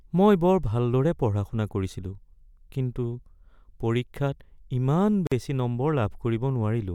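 A gap at a join of encoded pieces breaks this speech clip at 5.27 s, where the sound drops out for about 47 ms until 5.32 s and then resumes exactly where it left off. The silence points to two separately encoded segments spliced without trimming: the first piece's padded final frame and the second piece's start-up delay both remain, leaving a short hole with edges smeared by the codec.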